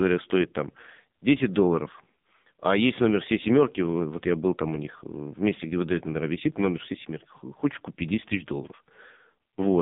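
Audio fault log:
throughout, AMR narrowband mobile codec: a hard spectrogram ceiling at 3.7 kHz with nothing above it, and little below 150 Hz. The heavy damage gives a buzzy, synthetic quality, which fits a low AMR-NB mode near 5.9 kbps rebuilding speech from few pulses.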